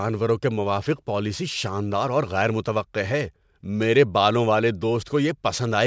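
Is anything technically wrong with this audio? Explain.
Yes. Aliasing runs through the whole speech clip. The sound points to a drop from 48 kHz to 16 kHz with no filter first. Energy above 8 kHz folds back down, roughly 25 dB below the speech. Sibilants turn gritty and metallic.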